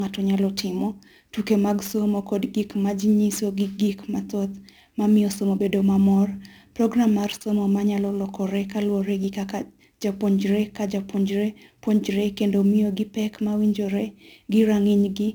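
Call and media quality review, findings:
Sample clock jitter, throughout. Unstable converter clock, timing error around ten microseconds; steep speech transients mis-sampled, hiss about 25 dB down, gone in pauses.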